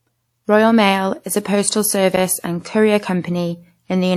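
From 2.12 to 2.27 s, between "is a postal" and "and courier", there is a loose connector crackle lasting about 0.15 s. A worn or dirty contact in the signal path repeatedly made and broke, chopping the speech into an irregular burst of scratchy crackle.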